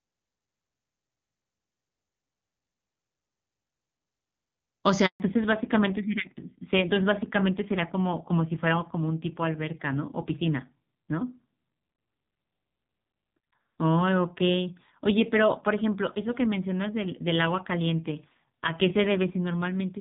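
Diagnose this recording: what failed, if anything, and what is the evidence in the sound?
Network stage, handover gap: the speech drops out at 5.06 s and stays silent until 5.20 s, a 140 ms hole. No speech frames arrived while the call moved between networks, so the decoder had nothing to play and that stretch of speech is simply lost.

Codec stage, fallback to narrowband: from 5.20 s to the end, the band stops sharply at 4 kHz and the speech sounds duller and rougher. Before the gap, the clean wideband HD Voice sound fits AMR-WB at its top rate. After it, the sound points to AMR-NB at a low rate, around 5.9 kbit/s.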